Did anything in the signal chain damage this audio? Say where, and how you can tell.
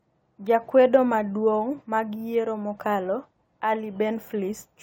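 Yes, at the codec stage. Coding artefacts run through the whole clip. This is likely low-bitrate audio saved at a high bitrate, with an AAC source's losses carried into MP3.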